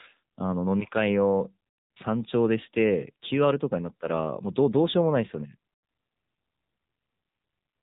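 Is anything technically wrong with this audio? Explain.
Yes. Throughout, the speech sounds thin, buzzy and synthetic, with nothing above 3.8 kHz. That's the AMR narrowband mobile codec at a low bitrate, consistent with a mode near 8 kbps.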